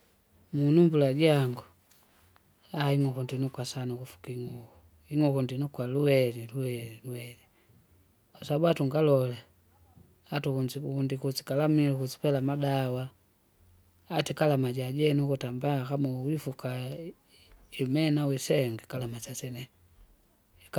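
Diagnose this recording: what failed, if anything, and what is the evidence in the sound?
Nothing failed; no fault is audible in the recording.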